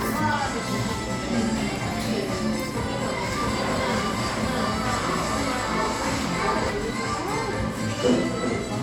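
From 3.32 s to 6.70 s the sound is doubled: a second full-band copy at roughly equal level trails by about 0.7 s, with no decay or room colour, appearing and vanishing abruptly. This doubled audio track likely comes from a slower capture path or misaligned edit.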